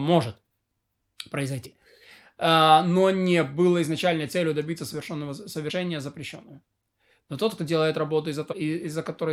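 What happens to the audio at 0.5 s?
Nothing goes wrong at 0.5 s: the speech there plays through intact, with no dropout, click or distortion.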